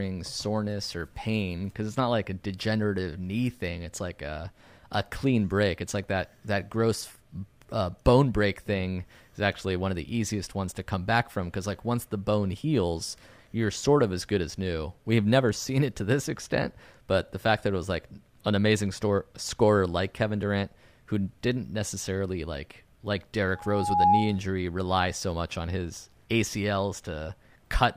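At 23.55 s, just after "didn't necessarily like like", a loudspeaker feedback squeal takes over. A single 827 Hz tone swells over about half a second to roughly 10 dB above the speech. The microphone is picking up its own loudspeaker with loop gain above unity. The squeal breaks off at 24.39 s, before "rely so much on".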